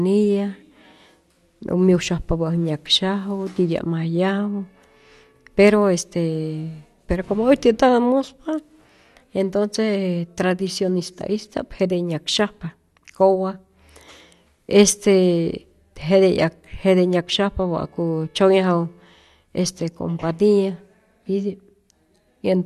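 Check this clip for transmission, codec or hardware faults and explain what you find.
One fault runs through the whole speech clip. Clock slip clicks, 0.13 to 22.64 s: likely unsynchronised clocks roughly 300 ppm apart slip one sample about every 70 ms, heard as a steady soft rattle.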